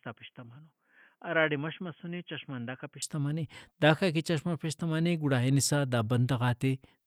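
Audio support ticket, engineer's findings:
Dull, boxy speech 0.0 to 3.02 s, nothing above 3.3 kHz, level about 10 dB down, with a faint noise floor far below the signal. Full band returns abruptly at 3.02 s, no gap. Likely input switched to a poorer device. Spectrogram: hard ceiling, then a sudden widening.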